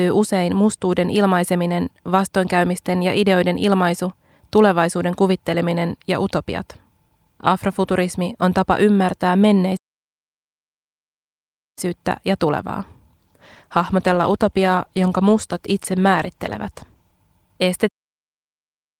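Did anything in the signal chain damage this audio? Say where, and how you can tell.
Yes. At playback, the sound stops dead in mid-flow twice. After "on tapa ymmärtää" there is silence from 9.76 s to 11.78 s, about 2.0 s, before it picks up with "ja tulevaa". A second gap runs from 17.88 s to 18.99 s, about 1.1 s, around "se ammentaa maagisesta". Clean, full silences with no fade point to a playback stall, most likely the player's buffer running empty or its output thread being blocked.

In the call-processing and codec stage, a stretch beginning after "ja tulevaa", from 13.19 s to 17.19 s, turns rough and muffled, with a watery smear on the sound. This is a call bitrate drop. The bandwidth estimate fell and the Opus encoder went from 48 kbps to 18 kbps, holding the lowest rate for about 3.9 s. At that rate it codes far more coarsely and trims the top end of the spectrum until the bitrate recovers.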